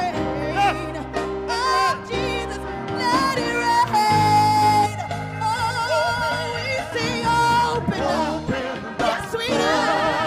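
From 4.86 to 6.92 s there's channel delay causing comb filtering: one side runs about one and a half milliseconds late, so the mono sum cancels at evenly spaced frequencies, starting somewhere near 300 Hz. The audio turns hollow and phasey until it clears.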